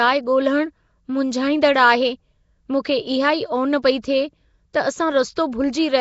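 The speech has most likely passed through the Nellymoser Asao codec, Flash's old microphone coder. It codes short blocks with a fixed, meagre bit budget, so bands too weak to earn bits are filled with noise instead of real signal. The damage is plainly audible. A rough, hissy halo clings to the speech, which sounds smeared and underwater. Nothing survives above 7.7 kHz, and the overall coarseness fits a stream of around 32 kbps. At 4.73 s the same block-based coding produces pre-echo. A sharp attack sits late in a coding block, so quantisation noise sized for that loud onset is spread back across the quiet moment before it. The result is a brief hiss of about 11 ms leading into the attack, which then lands softened and blurred rather than crisp.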